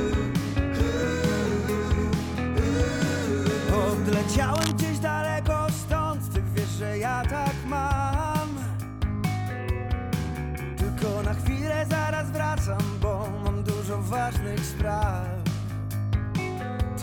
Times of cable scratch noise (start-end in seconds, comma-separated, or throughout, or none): 4.51-4.72